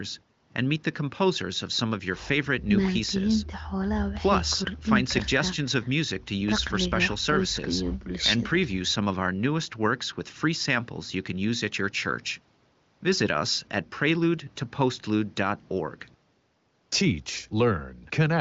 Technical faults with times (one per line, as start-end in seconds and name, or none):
none